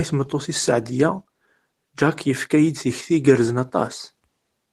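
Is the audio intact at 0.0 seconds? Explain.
Yes, at 0.0 seconds the speech is intact, with no dropout, click or distortion at that moment.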